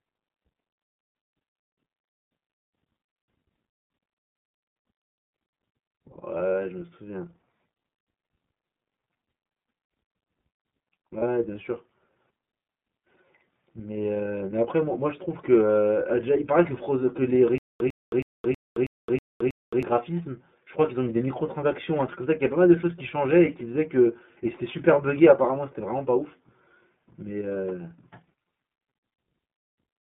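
Throughout, the speech carries iLBC codec coloring: a slightly rough, synthetic timbre, with the spectrogram empty above about 3.6 kHz and below 150 Hz, which fits iLBC's 30 ms mode at 13.33 kbps. From 11.18 to 11.23 s, a lost iLBC frame of 30 ms is concealed by a repeated pitch cycle, a brief buzzy held vowel showing as a short run of similar, repeating waveform periods. From 17.58 to 19.83 s comes a stutter with silent gaps, likely from a stalling stream: a 102 ms fragment repeats seven times every 321 ms, separated by 218 ms flat-line silences visible as evenly spaced blocks. At 28.25 to 28.28 s, another single lost iLBC frame produces the same brief buzzy fill before the speech recovers at once.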